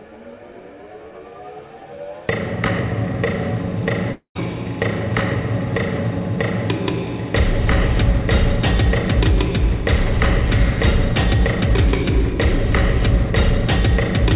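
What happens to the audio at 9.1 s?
Nothing goes wrong at 9.1 s: the audio carries on intact through that moment, with only the narrow call-codec bandwidth, nothing above 4 kHz, that runs through the whole path.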